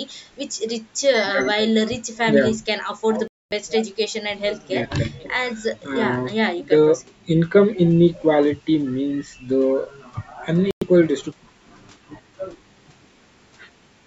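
At 3.28 s the speech drops out to dead silence for roughly a quarter of a second, then resumes at 3.52 s, and it happens again from 10.71 to 10.84 s with a shorter gap of about a tenth of a second. That's most likely a Bluetooth stall: radio interference held up packets, the headphone buffer ran empty, and playback just sat there until the resent data came through. The band-limited sound, with nothing above 8 kHz, is the normal call microphone processing.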